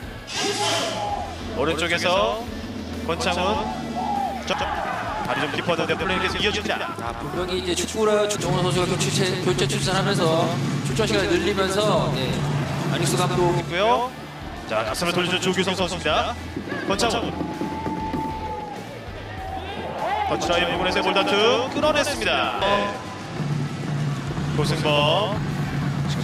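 The whole clip has a doubled audio track: a second full-band copy trails the original by about a tenth of a second, sitting roughly 5 dB down, with no decay or room colour. That likely comes from the sound being captured twice through a slower parallel path.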